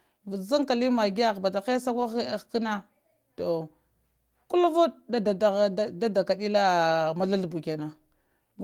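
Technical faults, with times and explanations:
6.53 s, lost packet rebuilt from error correction: a dropped packet was replaced by its low-bitrate copy, leaving no gap but about 20 ms of rougher, noisier speech.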